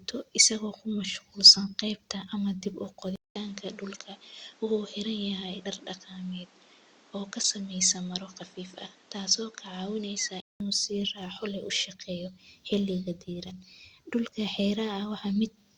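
Speech, and from 3.16 s to 10.60 s the sound goes duller and boxier, with nothing above 8.3 kHz and a new noise floor sitting around 30 dB under the voice, while the level hardly moves. A short gap of about 200 ms marks the change. That pattern points to an input switched to a poorer device, likely a different microphone or a headset taking over, before the original input comes back at 10.60 s.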